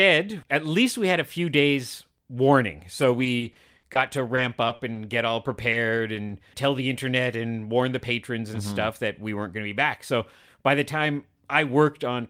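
Repeated packet loss (robotic sound) runs from 3.01 to 5.29 s, right after "a few days warning". Packets kept failing to arrive across this stretch, leaving nine gaps, the longest 60 ms, which total 240 ms, about 11% of the span. The receiver bridged each hole by extending the preceding sound, and the next hole came soon after. The speech turns choppy, with slivers of it missing.

Short concealed packet loss follows at 5.71 to 5.75 s, then at 6.13 to 6.17 s and 6.27 to 6.31 s, both of those just before "tell the internet and". Each time 20 ms never reached the decoder, which invented a stand-in by carrying the last sound forward (pitched if voiced, shaped noise if not) before blending back. Each one is a brief smear or wobble, and a short consonant can drop out.

A lost packet rebuilt from error correction falls within the last 20 ms of each of those three concealments, at 5.73 to 5.75, 6.15 to 6.17 and 6.29 to 6.31 s. 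A fourth stands alone at 5.97 to 5.99 s. In each case a 20 ms packet was lost, but the next one carried a low-bitrate duplicate, so the decoder played that copy with no gap. Those 20 ms sound grainier and noisier than the speech around them.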